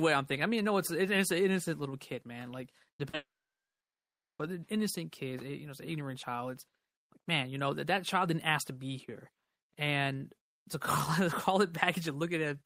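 At 2.97 to 3.01 s and 3.09 to 3.15 s, short concealed packet loss leaves 20 ms and 40 ms gaps patched by extending the preceding sound, heard as brief smears. From 3.15 to 4.41 s comes a long network dropout, likely: a short fading continuation, then about 1.2 s of silence before the audio resumes with that stretch missing.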